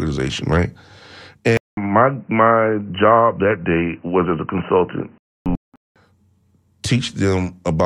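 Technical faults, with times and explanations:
1.57 to 5.96 s, input switched to a poorer device: the sound abruptly turns dull and boxy, with nothing above 3 kHz, then opens up again at 5.96 s. A short silence of about 200 ms marks the switch, and a new noise floor sits roughly 40 dB below the speech while the level stays about the same. This is likely a change to a narrower-band microphone or headset profile. On a spectrogram, everything above 3 kHz is cleanly cut off across that span, with a brief blank column at the switch. On the waveform, the envelope shows no level step.
5.18 to 5.74 s, corrupt frame muted: the audio drops abruptly into a silent hole of about 0.56 s, which fits roughly six compressed frames that the decoder rejected and the player replaced with silence. The surrounding timing is unchanged, so the speech resumes exactly where it should. On the waveform, this is a flat line with hard edges. 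On the spectrogram, it is a fully empty vertical band inside the narrowed section.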